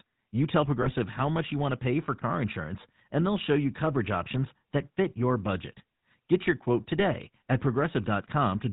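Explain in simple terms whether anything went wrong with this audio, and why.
Yes, two things went wrong. Throughout the recording the speech has passed through the GSM full-rate codec, the coding used by early mobile phones. It rebuilds the voice from a simple model of the throat and mouth driven by rough, evenly spaced pulses, and it cuts off everything above 4 kHz. That gives the whole clip a steady buzzy, gravelly roughness and a muffled top end. Because the roughness never lets up, it comes from the coding itself rather than from a bad connection.

On top of that there are two short bursts of GSM bit errors, where scrambled data reached the decoder as if over a weak phone signal. The first runs from about 0.82 to 0.93 s, just before "how much you want". The second runs from about 6.97 to 7.04 s, just after "your quote". In each burst the decoder was handed wrong settings for the sound's tone, pitch or loudness, so the voice briefly turns into a squawk or gargle.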